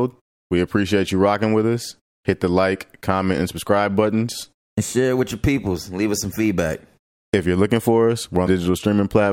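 At 8.45 s the speech jumps forward, and the next 30 ms, up to 8.48 s, come out damaged. The span is about one 26 ms MP3 frame. The likely cause is a broken MP3 bit reservoir. Frames were dropped at that point. The frame after the gap then reached back for borrowed data and read bytes from the wrong frame. It did not decode as clean audio.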